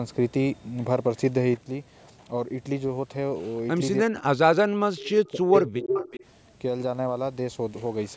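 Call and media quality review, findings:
Speech suppressed in double talk, 4.05–6.04 s: talker's level dips in pieces, about 1.5 s affected in total, deepest drop around 40 dB, while the far side is also speaking. Likely cause: echo canceller unable to separate near talker from loudspeaker echo, attenuating both. Unlike a network dropout, the gaps follow the overlap. The band limit at 8 kHz from call microphone processing is present throughout, not only in this span.

Echo leak, four bursts at 4.98–5.02 s, 5.26–5.30 s, 5.54–5.64 s and 5.90–6.25 s: delayed copy of the voice returns, at 289 ms for the first two, faint then barely audible, and at 372 ms for the last two, about as loud as the original. Likely cause: residual loudspeaker pickup getting past the loudspeaker side's canceller. Unlike reverberation, it is a discrete repeat with a fixed lag, and the delay shifts partway through.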